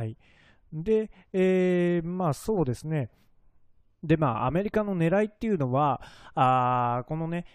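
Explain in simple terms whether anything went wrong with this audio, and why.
Nothing went wrong: the speech runs steady and unbroken throughout, with no audible fault at any point.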